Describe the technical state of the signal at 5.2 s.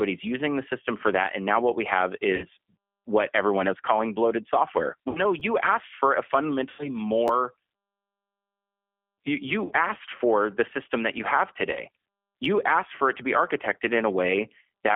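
Right after "is calling bloated software", speech packets drop out from 5.09 to 5.20 s, about 60 ms missing, consistent with two lost packets. This is VoIP packet loss concealed by the speech codec: the decoder stretches its last pitch and filter, leaving a fading buzzy tone or coloured noise and weakened speech. Underneath, the G.729 codec rebuilds speech at 8 kbit/s within a 200 Hz to 3.4 kHz band, giving plainly audible rough, synthetic coloration.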